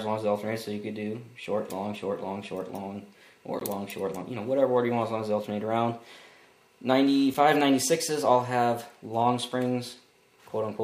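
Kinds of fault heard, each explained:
Block of digital silence: two runs of samples were replaced by zeros, so the output cuts abruptly to nothing and back without any fade. At 3.60 s this leaves a 16 ms hole; at 7.34 s, a 5 ms gap heard as a tick.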